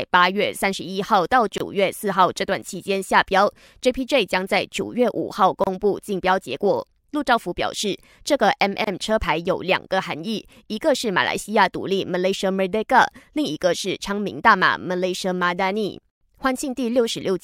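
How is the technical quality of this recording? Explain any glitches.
Three brief holes in the speech mark it as assembled from separately encoded pieces. Each is a gap at a join of encoded pieces: at 1.58–1.60 s (about 25 ms), 5.64–5.67 s (30 ms) and 8.84–8.87 s (29 ms). Each run's leading encoder delay and final-frame padding stayed in at the joins, so abrupt, slightly smeared silences cut in. Unlike a dropout, the speech then resumes exactly where it stopped, with nothing skipped.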